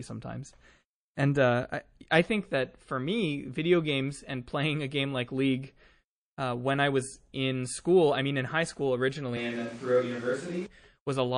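Throughout the speech, the sound is watery and swirly. S sounds chirp metallically. Attacks smear. This plainly audible damage is likely MP3 compression at a low bitrate, around 40 kbps, switching weak detail on and off.

From 1.15 to 1.17 s comes a pre-echo. A hiss about 17 dB above the quiet before it leads a sharp attack by some 21 ms. The codec spread noise meant for the loud part across its block. It seems short blocks were never used.

From 9.37 to 10.66 s, the speech suddenly turns roomy and hollow, with less bass. The level stays roughly the same. Room noise sits only about 20 dB below the speech. The likely cause is a switch to a distant microphone, and then back.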